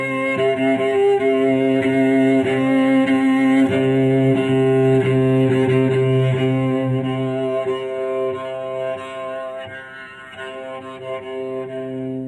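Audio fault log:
No faults are present in this recording of sounds. Nothing in it calls for an entry in this log.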